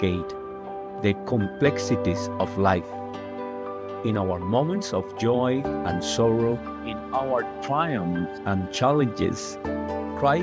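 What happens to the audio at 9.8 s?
At 9.8 s the audio is intact, with nothing there beyond the ordinary call microphone processing that trims the deepest bass and leaves no content above 8 kHz.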